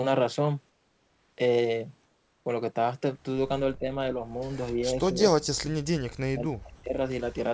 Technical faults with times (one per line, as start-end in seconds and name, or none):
0.70-1.38 comfort noise in place of the background
2.06-2.46 comfort noise in place of the background
3.79-3.98 speech suppressed in double talk
4.67-4.71 echo leak
4.72-5.71 speech suppressed in double talk
6.22-7.00 speech suppressed in double talk
6.76-6.84 sound dropped by the voice detector